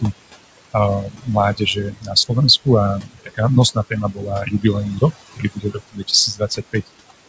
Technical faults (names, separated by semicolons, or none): overdone noise removal; noise suppressor artifacts; speech cut by the noise suppressor